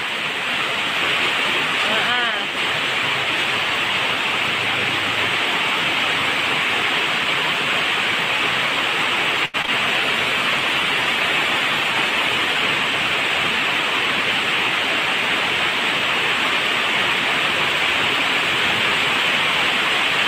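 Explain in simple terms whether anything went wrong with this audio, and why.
Yes, three kinds of trouble cluster near the middle.

A short stall from a late packet at 9.45 to 9.56 s: a piece arrived late, so the last sound is held about 0.08 s, then resumes with nothing lost.

Short concealed packet loss at 9.62 s and 9.66 s: two pieces, each about 0.02 s, never arrived and were patched with guesses. It is a quick smear where real sound is actually missing.

A call bitrate drop from 10.03 to 12.70 s: the connection squeezed the audio hard, so it turns rough and muffled for about 2.6 s. It is a lasting change in quality rather than a momentary glitch.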